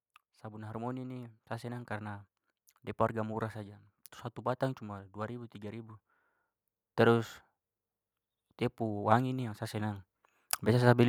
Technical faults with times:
0.41-2.25 automatic gain rising

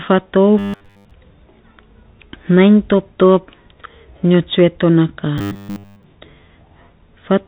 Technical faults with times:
0.59-1.11 robotic sound from repeated short buffers
5.38-6.04 robotic sound from repeated short buffers

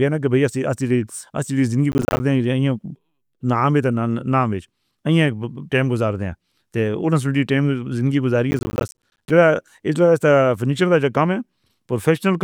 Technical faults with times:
1.92-2.20 processor overload crackle
8.51-9.30 processor overload crackle

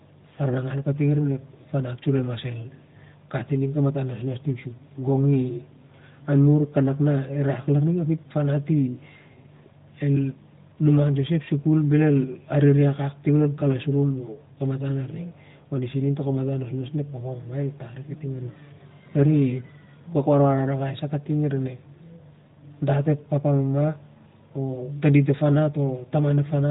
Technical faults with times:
none

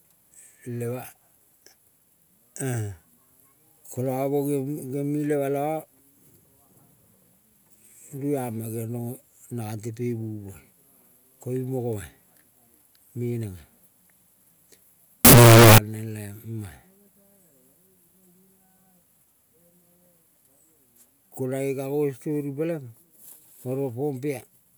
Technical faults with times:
15.25-15.78 signed and unsigned mixed up

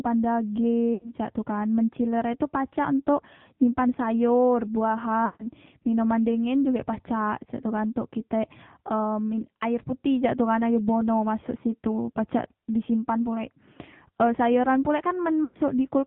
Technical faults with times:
0.00-16.06 AMR narrowband mobile codec
0.94-1.13 lost AMR speech frames
5.26-5.47 lost AMR speech frames
15.44-15.58 lost AMR speech frames

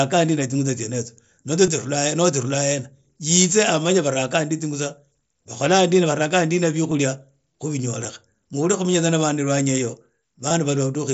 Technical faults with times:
1.66 concealed Bluetooth headset packet loss
6.90 concealed Bluetooth headset packet loss
8.04 concealed Bluetooth headset packet loss
10.49 concealed Bluetooth headset packet loss

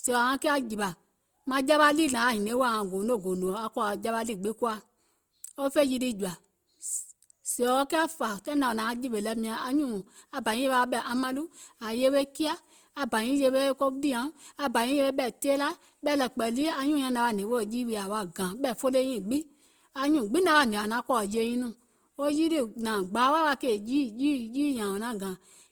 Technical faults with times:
0.00-25.71 Opus compression

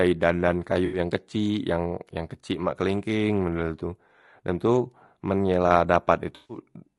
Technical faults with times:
0.00-6.98 low-delay AAC compression
0.85-0.99 AAC frame loss with concealment
6.35-6.57 AAC frame loss with concealment

